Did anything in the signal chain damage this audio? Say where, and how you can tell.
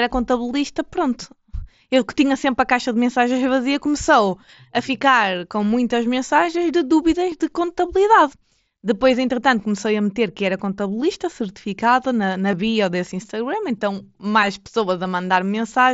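Yes, there's concealed Bluetooth headset packet loss on the wireless link, at 7.31 s and 12.52 s. Each is a tiny 7.5 ms patch, about one dropped frame, that the phone filled by repeating a matching bit of recent waveform, so it's nearly seamless over the light mSBC grain.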